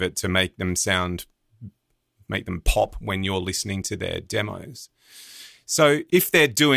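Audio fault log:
No faults heard anywhere in the speech recording.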